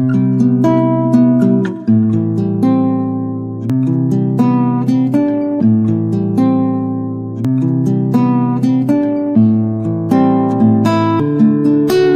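A recorder or processor likely working in 4-second chunks drops roughly 300 ms each time it switches chunks: audio missing between chunks. The sound jumps abruptly forward at 3.70, 7.45 and 11.20 s, with the two sides butted together and no silence between.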